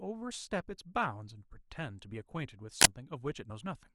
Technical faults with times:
2.81-2.85 uninitialised buffer

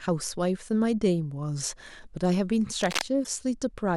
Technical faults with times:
2.80-3.02 cable scratch noise
3.23-3.27 broken MP3 bit reservoir

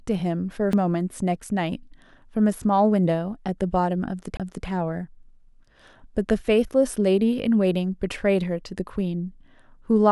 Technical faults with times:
0.73 CD skip
4.37-4.40 CD skip

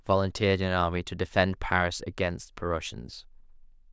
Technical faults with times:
none

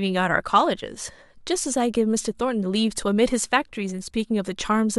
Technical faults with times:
0.36-4.99 resampler restarted on every block

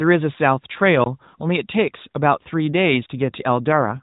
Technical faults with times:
1.04-1.06 block of digital silence
3.72-4.02 AMR rate drop

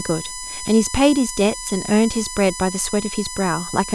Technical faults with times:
0.00-3.94 USB whine

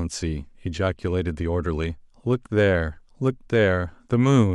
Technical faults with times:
none

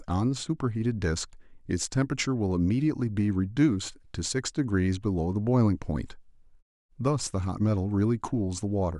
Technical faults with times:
none

